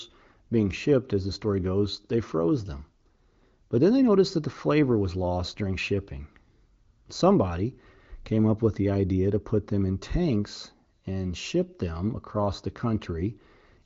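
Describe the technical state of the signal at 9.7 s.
At 9.7 s the signal is intact, with the speech carried cleanly through the AMR wideband (HD Voice) codec and no fault to be heard.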